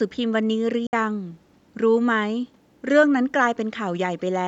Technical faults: Bluetooth dropout

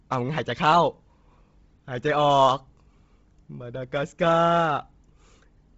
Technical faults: Bluetooth LC3 compression

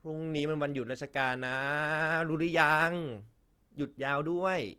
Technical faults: Opus compression

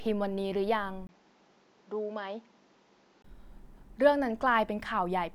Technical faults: input switched to a poorer device

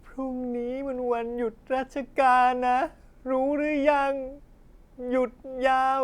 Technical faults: none

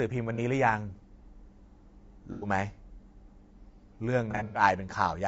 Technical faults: low-delay AAC compression; AAC frame loss with concealment

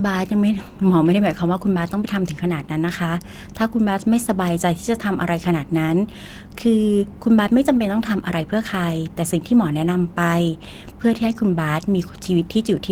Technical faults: none

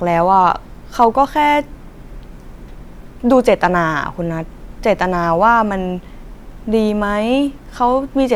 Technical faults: hard clipping

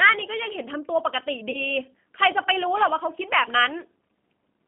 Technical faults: G.729 codec; VoIP packet loss concealed by the speech codec

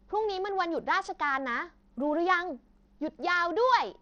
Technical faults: Bluetooth SBC compression

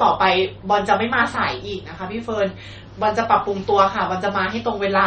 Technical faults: MP3 compression

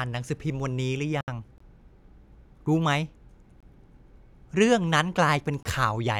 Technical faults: gap at a join of encoded pieces; gap between chunks

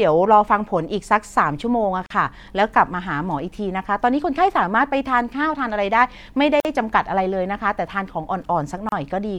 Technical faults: gap at a join of encoded pieces

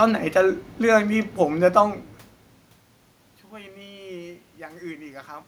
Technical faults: none

